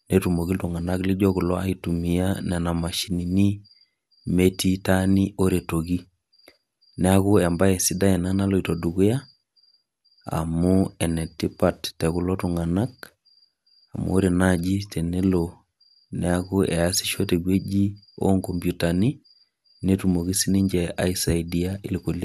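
No technical faults turn up anywhere in this speech recording. There is nothing at any point in the timeline to mark.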